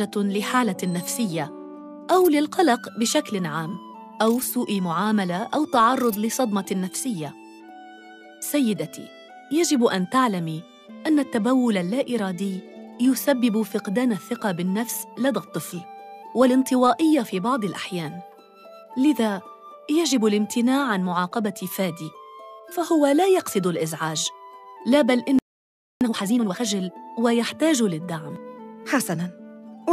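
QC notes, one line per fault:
25.39–26.01 s, playback stall: the sound just drops out mid-flow for about 0.62 s and leaves dead silence, then picks up again. That's most likely the player running dry on data or having its output thread held up until it could recover.
26.01–26.63 s, time-compressed catch-up: right after the gap the audio comes back rushed, running at 2x for about 0.62 s with no pitch change. The player is clawing back its backlog by snipping out tiny slices and cross-fading the joins.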